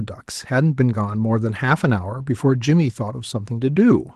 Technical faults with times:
none

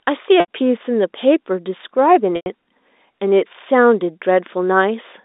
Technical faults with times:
0.40-0.47 packet loss with pitch repetition
2.36-2.46 packet loss with pitch repetition

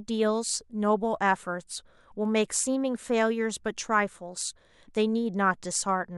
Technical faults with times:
none

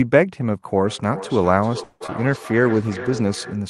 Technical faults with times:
0.84-3.70 feedback echo between two devices
1.83-2.02 call audio freeze
2.06-2.13 short concealed packet loss
2.31-3.41 call bitrate drop

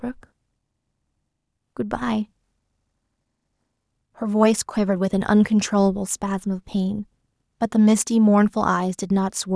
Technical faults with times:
none

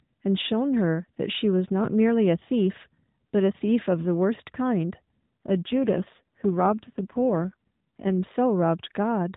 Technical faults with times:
5.31-8.26 AMR rate drop

